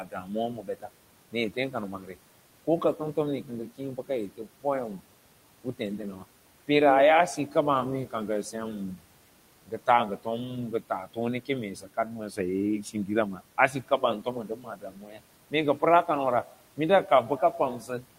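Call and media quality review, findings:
Noise suppressor artifacts, full clip: background pulled down about 18 dB between phrases, rising back under speech. Suppressor gain tracking frame by frame, treating steady room noise as removable bands.

Speech cut by the noise suppressor, 0.04–5.08 s (around 1 s total), 5.64–6.69 s and 7.36–9.03 s (around 0.2 s each), 9.67 s to end: soft consonants and word endings swallowed, drops of about 19, 14, 15 and 17 dB. Speech energy misread as noise.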